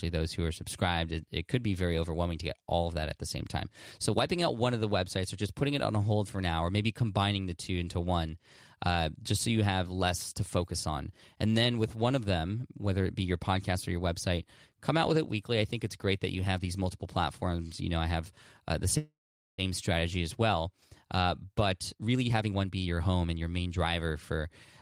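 A speech clip in which, after "I have uh the", the sound stalls from 18.97 to 19.61 s, trailing off into roughly 450 ms of silence before resuming intact at "strategy as well". This is a call audio freeze, likely from delayed packets draining the jitter buffer. From 21.06 to 23.86 s, delivery turns hurried, running about 122% speed at unchanged pitch. This jitter buffer speed-up trims short pitch-period slices, removing around 0.7 s to shed the built-up delay.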